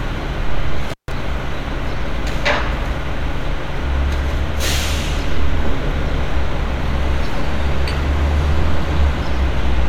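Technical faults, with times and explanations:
0.89–1.12 s, intermittent contact: a loose connection opens for about 145 ms, cutting the sound with crackle at both edges and faint hiss beneath, unlike a clean digital dropout.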